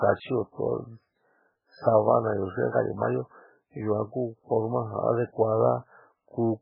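Speech heard throughout with nothing above 5.2 kHz and a heavy watery, swirling texture, likely MP3 compression at a very low bitrate near 8 kbps; the swirl distinguishes it from simple low-pass filtering.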